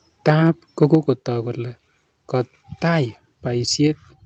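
From 0.27 to 0.5 s and again from 0.81 to 0.95 s, the loudest speech peaks turn harsh and crackly. This is microphone overload, likely from input volume set too high, which flattens wave tops against the converter's ceiling by about 5 dB and then about 1 dB. Unlike codec distortion, the grit tracks loudness alone.

At 0.95 s, just before "kole kotaai", and again at 3.87 s, voice and background drop together by about 4 dB in one step. This is the microphone volume stepped down, likely the call software cutting input gain after the clipping. A talker moving away would fade and dull gradually, but this drop is instant and even.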